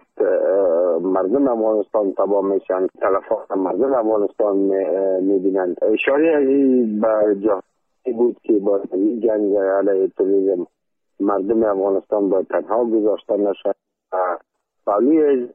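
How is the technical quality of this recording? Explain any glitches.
No glitches or technical faults can be heard here.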